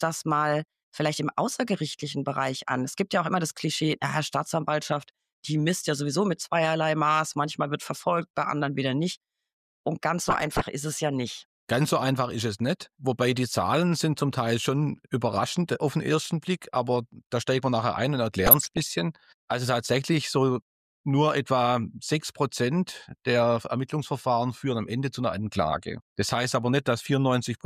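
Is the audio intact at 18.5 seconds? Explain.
No, 18.5 seconds falls inside a burst of DAB burbling that runs from about 18.46 to 18.87 s. Weak reception let bit errors slip past the error correction into the MP2 data, so corrupted samples put short blips of noise in single sub-bands and corrupted scale factors make sub-bands jump in level for up to a frame. You hear it as burbling blips and level jumps over the sound. The span points to a run of roughly 18 damaged frames and an error rate somewhere around half a percent.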